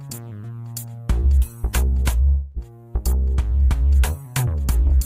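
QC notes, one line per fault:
2.27–2.59 s, long network dropout: For about 0.3 s the sound turns into a smeared continuation of what came just before. It fades as a buzz or hiss but never falls silent. It resumes with 280 ms missing, likely because packets stopped arriving and the receiver filled the gap.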